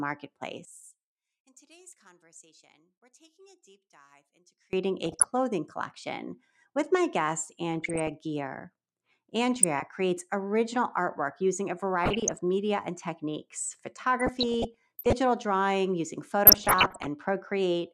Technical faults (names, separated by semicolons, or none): one channel inverted; DAB burbling